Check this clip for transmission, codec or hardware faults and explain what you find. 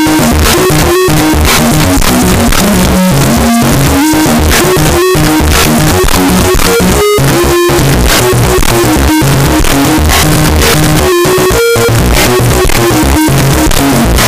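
There is one fault, present throughout. The 16-bit samples were likely read with signed and unsigned mixed up, flipping the top bit, so every zero crossing leaps across the full range and the audio becomes uniformly loud, harsh distortion.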